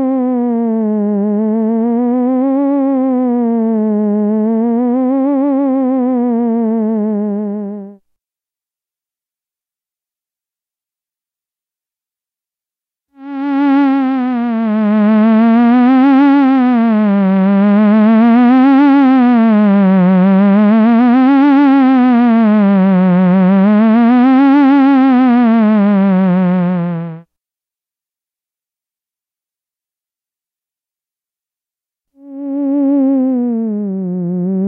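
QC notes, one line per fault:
No faults heard anywhere in these sounds.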